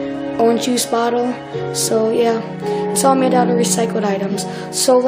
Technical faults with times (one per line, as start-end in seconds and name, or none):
0.64-0.69 compressed frames skipped
1.87-1.89 compressed frames skipped
2.91-2.96 compressed frames skipped